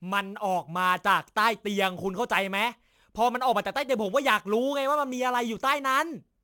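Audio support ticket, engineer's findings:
Sample clock jitter, whole clip. Hiss-like roughness riding on the speech, worst on loud and sibilant passages, gone in pauses. Probable component: converter clock, timing error of several microseconds, error about 25 dB below signal. Unlike a steady noise floor, it tracks waveform slope.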